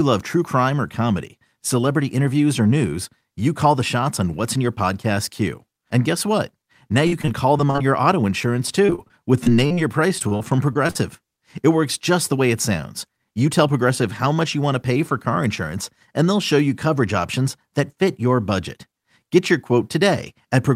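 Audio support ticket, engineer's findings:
Repeated packet loss (robotic sound), 7.07–7.83 s, 8.86–9.79 s, 10.19–10.97 s, bracketing "your auto insurance". Network/jitter buffer: 6–7 short gaps per burst, none over about 42 ms, bridged by extending prior audio. Clustered holes and choppy sound distinguish it from a single dropout.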